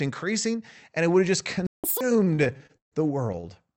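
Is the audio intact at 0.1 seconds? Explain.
Yes, at 0.1 s the speech is intact, with no fault at that moment.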